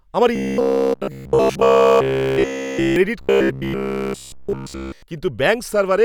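A speech clip with robotic sound from repeated short buffers from 0.36 to 2.96 s and from 3.21 to 5.03 s. In both stretches the voice becomes a rigid metallic buzz at 66.8 Hz, likely because a block of about 15 ms is being replayed while new audio fails to arrive, with essentially all of the sound repeated. A spectrogram shows evenly spaced horizontal harmonics at 66.8 Hz intervals, and the waveform shows identical 15 ms cycles.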